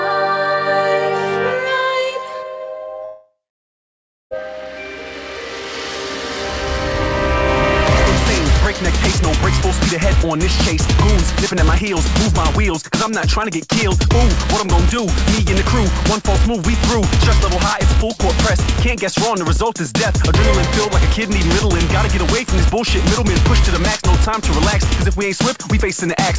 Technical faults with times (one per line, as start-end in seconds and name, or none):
3.05-4.34 long network dropout